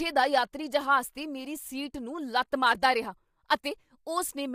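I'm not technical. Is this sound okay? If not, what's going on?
No. Throughout the speech the voice sounds rough and grainy, with a hiss-like fuzz sitting between the tones of the voice and a top end that sounds thin or artificial. This is most likely low-delay AAC compression, the kind used in video calls. It chops sound into very short slices to keep delay down, which blurs the finer pitch detail, and at a low bitrate there aren't enough bits to capture the voice cleanly, so the damage is plainly audible.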